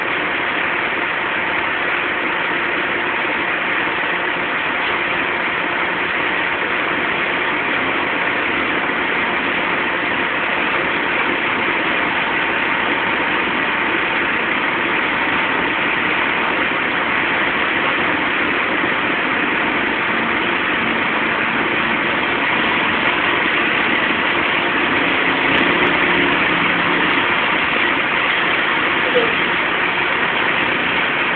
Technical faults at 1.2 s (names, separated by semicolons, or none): none